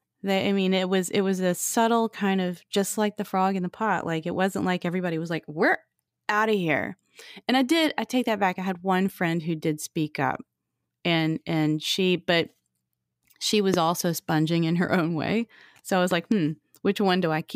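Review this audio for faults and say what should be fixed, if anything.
Loud pops occur at 13.74 to 13.76 s, just before "also sponging in her", and as a double pop at 16.11 to 16.34 s after "I was". They peak about 15 dB and about 10 dB above the speech. The pops are likely from a voltage pulse from a plug, a switch or static. Each appears as a tall waveform spike and a full-height vertical stripe on a spectrogram. Prevention: secure connectors and ground the equipment before recording.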